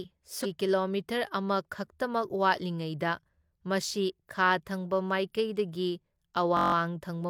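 A short speech recording with two distinct faults. Right near the start, from about 0.41 to 0.46 s, there's a quick glitch from damaged data in a compressed stream. A stretch of the encoded bitstream was corrupted, so the decoder choked on those frames, lost its place and had to hunt for the next valid frame header before it could carry on cleanly. That's why you get a brief glitch, with the audio snapping back just after. Then, from about 6.57 to 6.74 s, there's a system hang loop. The same 21.33 ms slice repeats eight times back to back, which fits a 1024-sample buffer, giving a buzzy stutter at about 46.9 Hz. Something upstream stalled while the audio hardware kept replaying its ring buffer. When the system came back, playback picked up where it left off, with essentially no audio lost.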